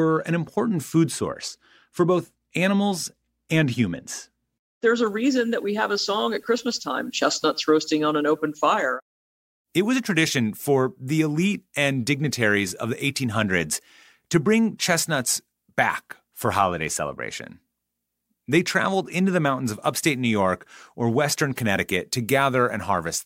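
From 5.07 s to the end, the speech has pre-emphasis left on. The treble was lifted and never cut back. Highs sit about 11 dB above 1 kHz at 10 kHz, which fits a 50-microsecond FM curve. Sibilants hiss and the sound turns thin and bright.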